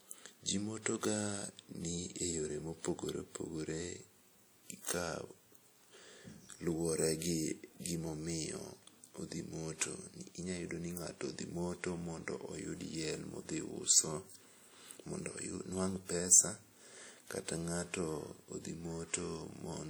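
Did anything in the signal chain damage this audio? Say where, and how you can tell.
Yes, at the codec stage, and it's there for the whole clip rather than at any one moment. The speech has that ringing, washy quality with a hiss that swells and fades along with the signal, which is the signature of WMA compression: a transform codec spreading quantisation noise over long blocks and zeroing weak components. The damage is plainly audible, which fits a bitrate around 48 kbps. Oddly, content still reaches up to about 20.1 kHz, so the encoder likely kept full bandwidth and starved the detail instead.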